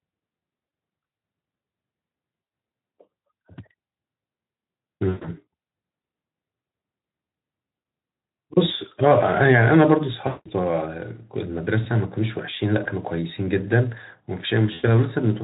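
Brief buzzy, smeared gaps that fade out break the speech at 0.67, 2.43, 5.09, 7.79, 10.27, 12.83 and 14.73 s, lasting 20 to 180 ms. This is VoIP packet loss concealed by the speech codec. The Speex decoder stretches its last pitch and filter while the level decays, and the longest losses drift furthest from the real sound.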